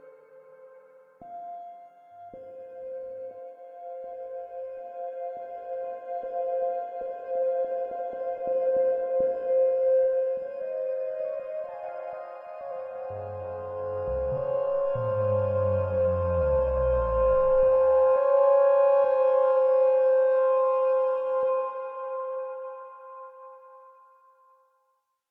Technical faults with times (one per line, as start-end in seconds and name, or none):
none